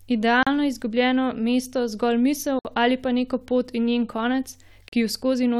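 At 0.43, 2.59 and 4.88 s the speech drops into silence for 37, 59 and 40 ms: a gap at a join of encoded pieces, where encoder start delay and last-frame padding were left in. Each dropout has smeared edges before the speech resumes unchanged.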